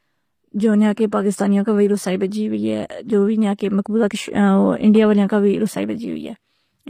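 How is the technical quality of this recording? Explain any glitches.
The recording has plainly audible codec damage. HE-AAC compression, throughout: the treble is likely rebuilt by band replication from lower bands, so s sounds turn gritty and metallic, with nothing above 15.5 kHz, which fits a low bitrate.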